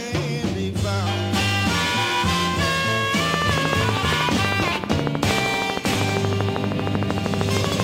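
Likely interference or a failing interface injects a train of clicks from 3.34 to 7.81 s, a steady ticking at 12.8 per second over the sound.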